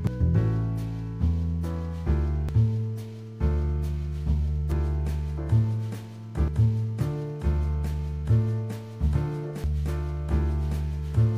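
A compressed audio stream with damaged data, heard as brief chirps or blips at 0.07, 2.49, 4.72, 6.48 and 9.64 s, where the decoder misreads corrupted frames and resyncs. A spectrogram shows thin broadband vertical streaks; the waveform shows abrupt discontinuities.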